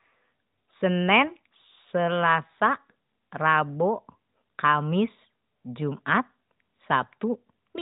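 No technical faults can be heard in this recording.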